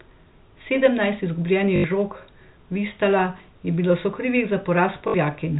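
Speech with packet loss with last packet repeated at 1.76–1.84 s (80 ms), 3.38–3.40 s just before "je bilo sokrivih", and 5.08–5.14 s. Each gap is filled by replaying the previous chunk, which fits 20 ms packets. The result is a robotic stutter on the longer runs and a small blip at 3.38 s, showing as identical repeated waveform blocks and evenly spaced vertical stripes on a spectrogram, under the telephone band's 4 kHz ceiling.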